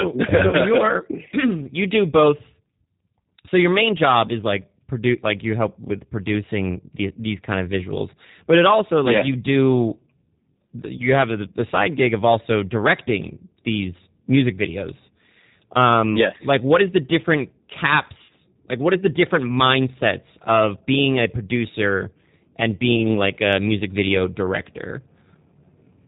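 Speech here, and the whole thing carries the sound of the G.729 codec: narrowband, with nothing above 4 kHz, slightly rough and synthetic, the kind of coarse rebuild you'd expect at around 8 kbit/s. The model reconstructs each stretch from a vocal tract filter, a pitch predictor and a handful of pulses, so the damage is plainly audible throughout. On top of that there are four spots of VoIP packet loss concealed by the speech codec: at 0.49 to 0.56 s (about 40 ms missing), at 10.97 to 11.07 s just before "have the the side" (about 20 ms), at 18.24 to 18.33 s (about 50 ms), and at 22.96 to 23.06 s, between "being a producer and" and "like a music video" (about 20 ms). At each one the decoder stretches its last pitch and filter into a fading buzzy tone or coloured noise, and because every frame leans on the previous one, the sound stays thin or smeared for a moment after the stream returns.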